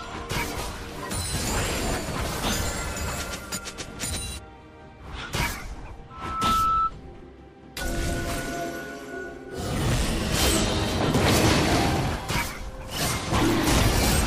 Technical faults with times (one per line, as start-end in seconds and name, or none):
6.10-6.92 loudspeaker feedback squeal